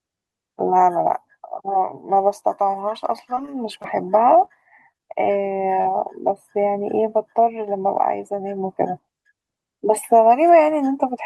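From 3.35 to 3.86 s the speech goes choppy. This is repeated packet loss. Five separate gaps fall within half a second, the longest about 16 ms. Each gap was filled by extending the preceding sound before the next gap arrived, so roughly 13 percent of that stretch is synthesized continuation. The rapid alternation of real and patched audio gives it a choppy texture with small pieces of the signal missing.

Short concealed packet loss follows at 4.45 to 4.49 s, 4.92 to 4.96 s, 4.98 to 5.01 s and 5.81 to 5.87 s. The first three each lose about 20 ms of audio. The last loses about 40 ms. In each case the decoder bridged the hole by carrying the last sound forward, pitched or noise-like depending on what preceded it, then crossfaded back into the received signal. Each one is heard as a brief smear or wobble. The 5.81 s event is the longest.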